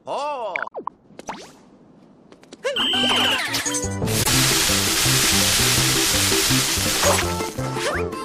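Damaged data in a compressed stream makes the decoder misread frames and lose sync, producing brief glitches in the sound at 0.64–0.72 s and 4.22–4.29 s.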